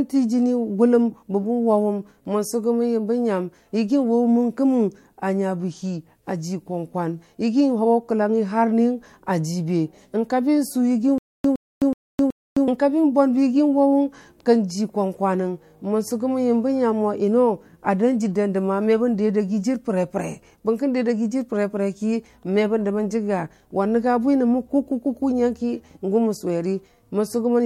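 From 11.18 s to 12.68 s the speech catches on a tiny fragment, about 113 ms long, which plays four times at a steady pace of one every 374 ms, each repeat followed by 261 ms of dead digital silence. This stutter with silent gaps most likely comes from the player or stream stalling: each retry replayed the last fragment it held, then ran empty. Whatever speech belonged in that stretch never arrives.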